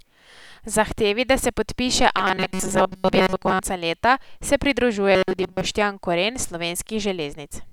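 From 2.18 to 3.60 s, right after "da se podpiše" and before "leta se", and again from 5.12 to 5.61 s after "leta se", the speech collapses into a rigid metallic buzz at 188 Hz, a robotic sound from repeated short buffers. Audio likely arrived too seldom, so a slice of about 5.3 ms was looped, covering most of the audio there. On a spectrogram this shows as evenly spaced flat harmonic lines, and the waveform repeats identical short cycles.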